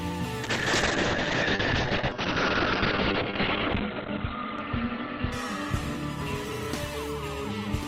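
Doubled audio track throughout: a second, full-band copy of the music trails the original by about a second, roughly 10 dB quieter, with no decay or room colour. The likely cause is the same signal being captured again through a slower path and mixed in.

Call bitrate drop from 0.44 s to the end: the bandwidth estimate collapsed, pushing the encoder from 96 kbps down to 8 kbps, where it sits for about 2.9 s. Coding becomes coarse and the audio band narrows from 20 kHz to 4 kHz, so the music turns muffled, rough and watery.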